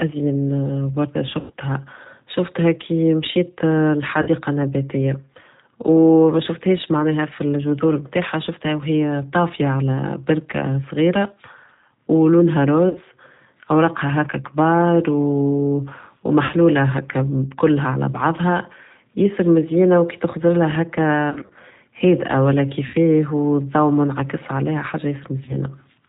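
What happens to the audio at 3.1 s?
At 3.1 s the speech carries G.729 codec damage, which runs through the whole clip rather than starting there. The speech is rebuilt from a vocal tract filter, a pitch estimate and a few pulses per short frame, at a rate consistent with 8 kbit/s, so nothing above 4 kHz survives and voicing sounds rough and slightly synthetic. A simple telephone band-limit would muffle the speech the same way but keep its natural texture.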